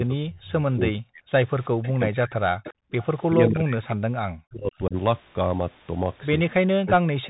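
Throughout, the speech carries a Bluetooth CVSD headset codec sound: nothing passes above about 3.8 kHz, consistent with a 64 kbps CVSD link whose one-bit adaptive steps can't keep up with fast, loud high content. Sibilants come out scratchy and a grainy hiss sits under the speech.

From 0.0 to 1.29 s and again from 1.8 to 2.68 s, the speech is pulled down in chunks, at its deepest by around 40 dB, for roughly a second in each span. This is likely speech suppressed in double talk: with both sides talking, the echo canceller attenuated the near talker along with the echo.

At 1.83 to 1.88 s, and more clearly from 2.64 to 3.34 s, a faint copy of the speech trails 381 ms behind, some 20 to 25 dB below it. This is likely echo leak, loudspeaker sound that the far end's canceller failed to remove and sent back.

The double-talk suppression returns from 3.35 to 4.96 s, again cutting roughly a second of speech by up to about 40 dB. 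It recurs from 6.82 s to the end, affecting a bit under half a second.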